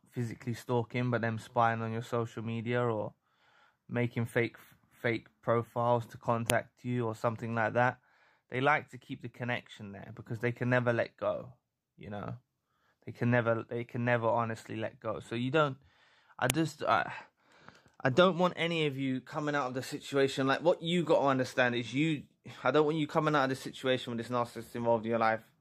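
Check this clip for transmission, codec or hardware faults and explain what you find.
Two sharp, loud clicks stand out, at 6.50 s and 16.50 s, exactly 10 s apart, and both cut through whatever the sound is doing at that instant. This is a file header played as audio. The stream appears to be built from 10-second WAV pieces joined without stripping each piece's header, so the few dozen header bytes at every join are decoded as sample values. They form a brief burst unrelated to the surrounding signal, which is heard as a snap at the start of each new piece.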